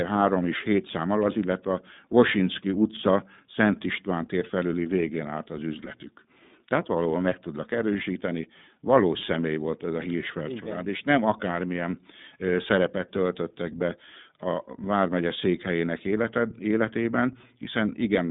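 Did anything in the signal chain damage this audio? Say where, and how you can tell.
Yes, at the codec stage: the whole speech clip has gone through the iLBC codec. The spectrogram shows nothing outside roughly 150 Hz to 3.7 kHz. Each frame's excitation is coded independently, which fits iLBC's 30 ms, 13.33 kbps mode, leaving a plainly audible rough, synthetic texture.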